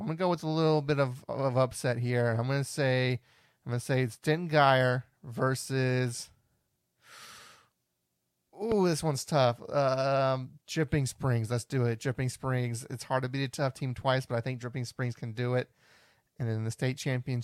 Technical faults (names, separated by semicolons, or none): loud pop